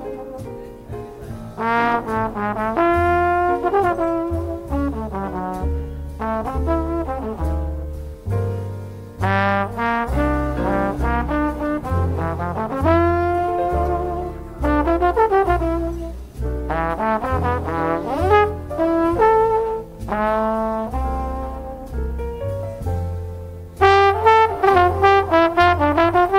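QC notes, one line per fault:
Nothing here to flag; I listened all the way through and didn't hear anything wrong with the audio.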